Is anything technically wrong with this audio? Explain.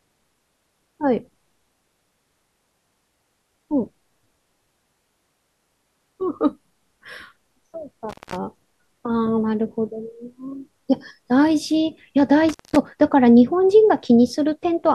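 Yes. The speech has two dropouts from an intermittent contact. The first runs from 8.09 to 8.36 s. The second runs from 12.49 to 12.76 s. Each time, a loose cable or plug briefly breaks the signal path. The line stays open for 197 ms and then 192 ms. The speech cuts out abruptly. Crackle marks each edge as the contact scrapes open and shut. Faint hiss fills the gap.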